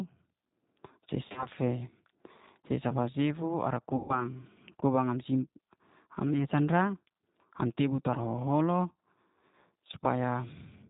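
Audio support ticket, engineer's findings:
G.729 codec, whole clip. Low-rate CELP coding, consistent with an 8 kbit/s G.729A stream. Speech rebuilt from a vocal-tract filter plus sparse pulse excitation, nothing above 4 kHz. Result: plainly audible roughness, synthetic texture, dull top end throughout.

VoIP packet loss concealed by the speech codec, 1.28–1.48 s. Scattered frame drops across 80 ms, longest gap 40 ms. Decoder extrapolates last pitch and filter at falling gain, giving brief smeared fill and weak, distorted speech until state recovers.

VoIP packet loss concealed by the speech codec, 3.96–4.22 s, right after "sifu ara". About 130 ms of loss. Concealment stretches the last sound into a fading fill, then speech returns thin and distorted while the predictor rebuilds.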